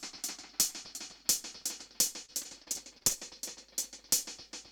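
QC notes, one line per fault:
2.25–3.13 s, repeated packet loss (robotic sound): the sound turns choppy as seven short holes, the longest 38 ms, are each bridged by stretching the preceding sound, so about a fifth of this stretch is patched-over filler rather than the real signal.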